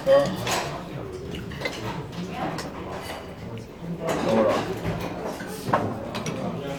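A recording of everyday sounds with no technical faults to report. Nothing at any point in it calls for a timestamp or a cause.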